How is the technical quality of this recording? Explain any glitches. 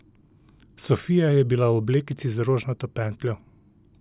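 No glitches turn up anywhere in this speech recording, so there's nothing here that needs explaining.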